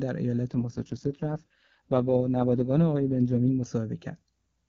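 From 0.50 s to 3.66 s the speech turns rough, buzzy and synthetic, with no gap and no loss of bandwidth, then clears again. This is an AMR rate drop: the link forced the AMR-WB (HD Voice) codec down from a rate that sounds like its clean top mode near 23.85 kbit/s to one that fits its lowest, 6.6 kbit/s, leaving too few bits to model the voice before the rate recovered.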